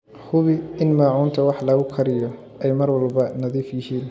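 From 1.4 s, after "in maacuunta", a resampler restarted on every block errs at each 100 ms edge, ticking ten times per second, with evenly spaced vertical spectrogram stripes.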